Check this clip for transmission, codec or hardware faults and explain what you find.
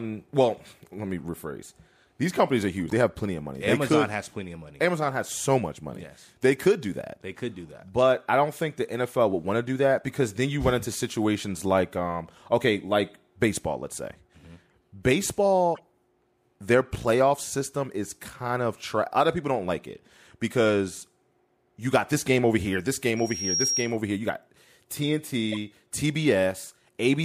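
Two kinds of fault are audible in this speech clip: decoded corrupt frames at four points and one burst of loudspeaker feedback squeal.

Corrupt frame decoded at 2.86 to 2.93 s (between "companies are" and "have plenty of money"), at 14.71 s, at 15.75 to 15.80 s, and at 25.52 to 25.57 s. Damaged compressed frames were played instead of concealed, so misread gains and codes put energy in the wrong spectral places for a few frames. The first and last peak near -20 dBFS, the 15.75 s one is softer, and the 14.71 s one is faint.

Loudspeaker feedback squeal from 23.16 to 23.97 s, right after "game over here this". A microphone was picking up its own loudspeaker, and at 5.6 kHz the loop gain exceeded one, so that frequency grew on its own. A thin, high tone swells over about 0.4 s until it is roughly as loud as the speech, then holds as a piercing whistle until 23.97 s.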